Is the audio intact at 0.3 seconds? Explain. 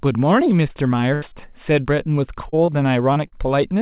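Yes, the speech at 0.3 seconds is intact, with no dropout, glitch or distortion, only the normal band-limiting of the call path, which leaves nothing above 4 kHz.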